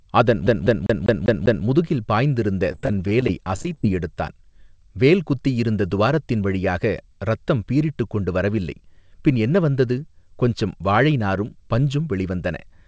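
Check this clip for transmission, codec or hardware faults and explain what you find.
Two faults show up, both in the first four seconds, heard over a call path whose band stops at 8 kHz, which fits a wideband codec such as G.722.

From 0.47 to 1.66 s the audio sticks like a CD stuck on one turn. A scratch keeps throwing the laser back, so the same 198 ms slice plays six times with a brief mute at each jump. Unlike packet loss, every repeat is identical and evenly spaced.

From 2.72 to 3.87 s there is repeated packet loss with a robotic sound. Eighteen short holes, none longer than 18 ms, are patched by stretching the last sound, covering about 16% of that stretch. The result is an uneven, robotic choppiness rather than a clean, regular loop.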